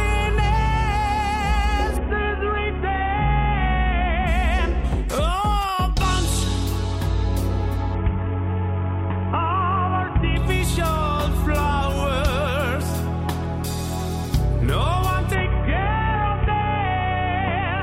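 A Bluetooth SBC bit pool drop, consistent with a fall from about 31 to 5, starves the upper sub-bands and coarsely quantises the rest. The treble dulls and gritty noise rises from 1.97 to 4.27 s, 7.95 to 10.37 s, and 15.35 s to the end.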